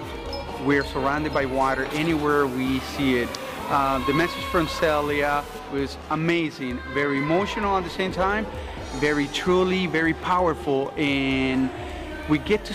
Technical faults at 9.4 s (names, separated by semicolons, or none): none